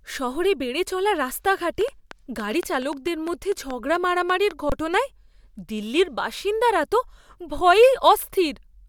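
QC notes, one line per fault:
1.81 to 4.52 s, train of clicks: a run of similar short pops, about 5.6 per second at an uneven pace, roughly fifteen in all, standing about 5 dB above the speech and heard through pauses too. That points to likely interference from nearby equipment or a faulty connection or power supply. Unlike a single dropout, the pulses repeat with a shared shape and leave the speech itself intact.
4.70 to 4.72 s, underrun with held sample: for about 23 ms the waveform freezes flat at its last value, which fits a 1024-sample buffer running empty, so the sound simply stops without a click at onset. Around 20 ms of live audio is lost, a single break unlike the repeating pulses earlier.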